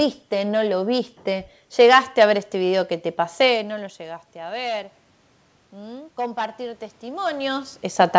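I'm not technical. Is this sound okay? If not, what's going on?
No. From 5.72 to 7.73 seconds, automatic gain rising: the system slowly turns itself up, so the voice and the background room noise grow louder together, unlike someone simply moving closer.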